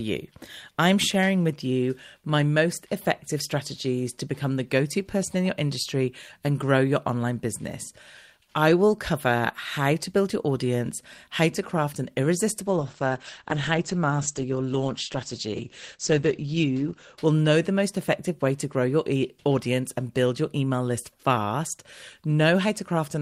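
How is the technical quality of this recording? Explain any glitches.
The recording has one clear glitch, a call bitrate drop from 12.69 to 17.23 s. The encoder was forced onto far fewer bits, which fits a fall from 32 to 11 kbps, held near the bottom for about 4.4 s. Coding grows coarse. High frequencies vanish above 8 kHz instead of 20 kHz. The speech sounds muffled and rough until the rate recovers.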